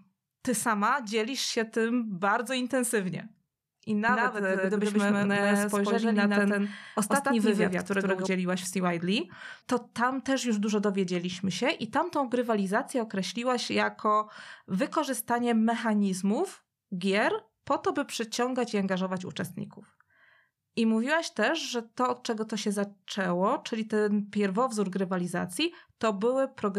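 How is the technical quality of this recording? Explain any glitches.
The recording has one clear fault. From 4.09 to 8.27 s, just after "tym bardzo intensywnie I", a doubled audio track appears. A second copy of the speech, about as loud as the original, trails roughly 150 ms behind. It was likely captured twice through a slower path. It sounds like a dry, slapback echo with no room tail, and it starts and stops abruptly. On a waveform and spectrogram, every syllable shows a full-band twin offset by that fixed gap.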